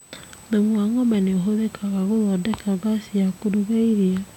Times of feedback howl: none

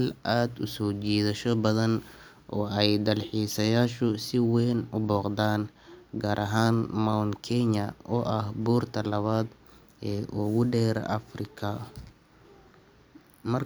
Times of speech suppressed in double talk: none

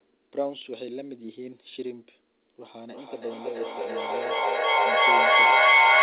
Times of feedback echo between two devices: 2.65-6.02

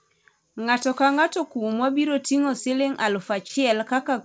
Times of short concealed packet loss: 3.48-3.51

